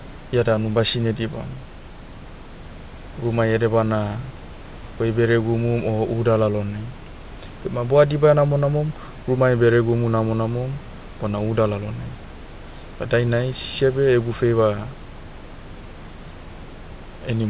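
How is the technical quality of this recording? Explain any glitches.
Nothing stood out on listening to this speech recording: it carries the narrow telephone-band sound of a G.711 call path with nothing above 4 kHz, and the room's background noise sits about 25 dB below the voice.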